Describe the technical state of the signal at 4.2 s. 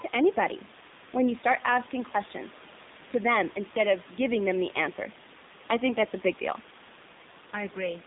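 At 4.2 s the speech is still going through the AMR narrowband mobile codec that affects the whole clip. It rebuilds the voice from a coarse vocal-tract model, at a coarseness consistent with a 7.4 kbps mode, and passes only 150 Hz to 3.7 kHz. The voice comes out thin, buzzy and plainly synthetic.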